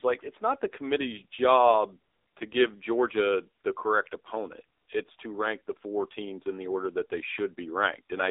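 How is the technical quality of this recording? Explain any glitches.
Quality is limited by mobile-codec damage across the whole recording. AMR narrowband mobile codec, throughout: the speech is confined to roughly 300 Hz to 3.7 kHz and rebuilt from a vocal-tract model excited by sparse pulses, so the voice sounds plainly buzzy and synthetic, which fits a low AMR-NB mode near 7.4 kbps.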